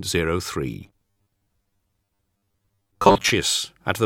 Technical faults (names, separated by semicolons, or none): robotic sound from repeated short buffers